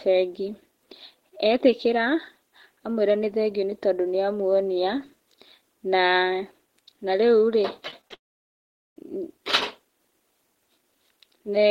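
From 7.88 to 8.13 s the speech turns choppy and robotic. This is repeated packet loss. Audio kept failing to arrive in time, in a quick run of short gaps, the longest about 22 ms. Each gap was patched by stretching the last bit of sound. Roughly a third of this span is filler rather than real speech. The result is a stuttering texture with small pieces missing.

At 8.14 s the audio breaks off entirely until 9.02 s. This is a long network dropout, most likely from the connection stalling. About 820 ms of speech is lost. A brief buzzy continuation of the last sound fades out, and then nearly 780 ms of silence follow. When sound returns, the missing stretch is simply gone, not delayed. The break comes straight after the choppy passage.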